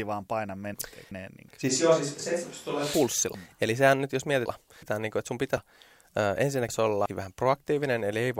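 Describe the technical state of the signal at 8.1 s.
At 8.1 s the speech signal is intact, with no technical fault at that moment.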